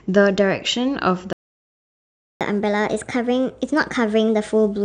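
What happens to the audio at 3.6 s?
At 3.6 s the speech is in a catch-up at higher speed, running from 2.41 s to the end of the clip. After a stall, the player resamples its buffered backlog at 1.25 times normal speed, so the speech sounds hurried and its pitch sits about four semitones high.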